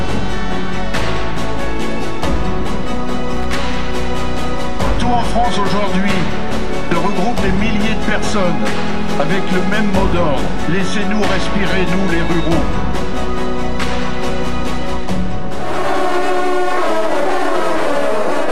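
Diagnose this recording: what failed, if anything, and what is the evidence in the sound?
DC offset runs through the whole recording, sitting at about -13 dBFS, which points to the analogue wiring or converter stage. It cannot be heard as such. The waveform rides on a constant shift away from zero, eating headroom and leaving steady energy at the very bottom of the spectrum.

Loose connector crackle appears from 3.37 to 3.46 s, a burst of roughly 90 ms of irregular scratching in the analogue wiring. A worn or dirty contact is making and breaking rapidly, chopping the sound.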